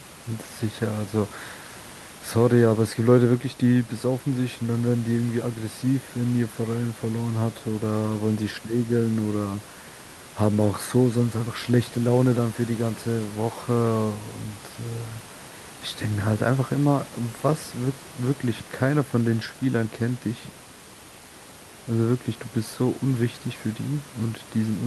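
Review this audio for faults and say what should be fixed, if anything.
Nothing needs fixing: the only thing under the speech is the room's own background noise, about 18 dB below it, and that belongs to the recording rather than the system.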